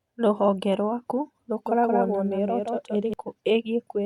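From 1.66 s to 3.14 s there is a doubled audio track, most likely because the speech was captured a second time through a slower path and mixed back in. A second full-band copy runs roughly 200 ms behind the original, a few decibels quieter, with no decay or room colour. It sounds like a dry, evenly spaced slapback trailing each syllable, and it cuts in and out abruptly at both ends.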